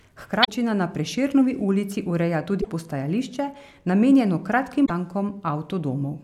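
Damaged data in a compressed stream hits at 0.41 to 0.49 s, 2.58 to 2.66 s just after "ulici ureja", and 4.82 to 4.90 s: corrupted bytes make the decoder misread frames and lose sync, leaving a brief 80 ms chirp, squawk, click or short hole in the speech each time.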